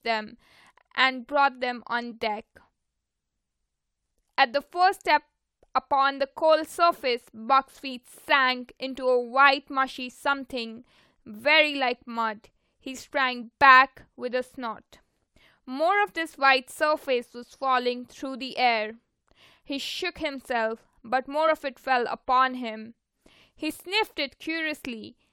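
Brief faults at 2.10 to 2.12 s, 13.41 to 13.43 s, 21.47 s and 23.70 s are damaged data in a compressed stream. The decoder misreads corrupted frames and resynchronises, producing a short disturbance where the stream was damaged.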